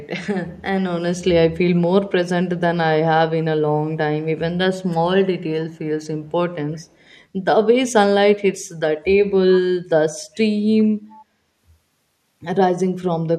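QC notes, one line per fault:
5.71–5.77 s, 6.75–7.22 s, 10.34–10.38 s, 10.78–10.84 s: echo leak. A faint copy of the speech returns 395 ms late, roughly 35 to 40 dB below it, in short scraps. This is likely a far-end echo canceller letting loudspeaker pickup through.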